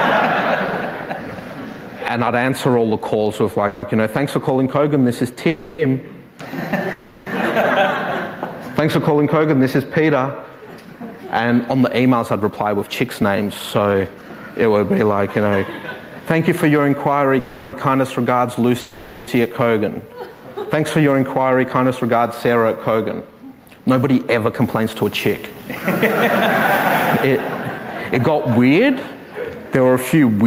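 Call audio freezes occur at 3.67–3.84, 5.48–5.80, 6.92–7.28, 17.40–17.75 and 18.81–19.30 s. Each time the sound stalls and the last bit is drawn out as a buzz or hiss that fades for 150 to 470 ms, then resumes where it stopped, with nothing lost. This likely comes from delayed packets emptying the jitter buffer. Jitter buffer speed-up follows at 12.00–15.03 s (111% speed, roughly a third of a second removed) and 20.97–25.80 s (109%, roughly 0.4 s removed). The receiver trims many short pitch-period pieces to shrink an overfilled buffer, so the audio sounds hurried at unchanged pitch.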